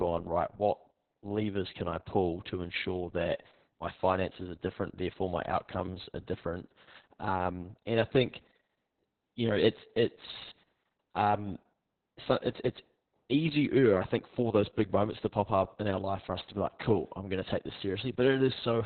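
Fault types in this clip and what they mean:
Opus voice compression: a very low bitrate, about 6 kbps, forces narrowband coding, leaving the speech muffled, cut off above 4.2 kHz, hoarse and slightly robotic.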